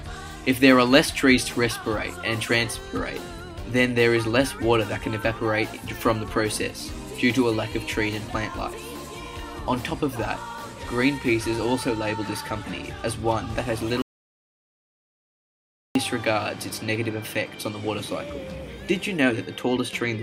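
An audio dropout to silence runs from 14.02 to 15.95 s, removing about 1.93 s of material. The sound stops abruptly mid-flow and returns just as suddenly, and the gap between is silence, with no background or room tone underneath. That points to the input signal vanishing while the recording carried on writing silence, likely from a momentary disconnection or mute upstream. Whatever occurred during those two seconds is not recoverable.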